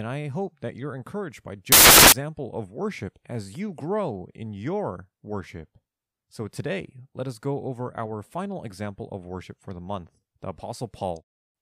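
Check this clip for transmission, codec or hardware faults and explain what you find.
One fault stands out in this speech clip. From 1.72 to 2.12 s, for about 0.4 s, the samples are built from the wrong bytes. The reader assembles each sample incorrectly. It may be shifted by one byte, have its byte order swapped, or use the wrong alignment. The rapidly changing low bits then become the largest part of each value. The result is a burst of loud, harsh broadband noise for that stretch.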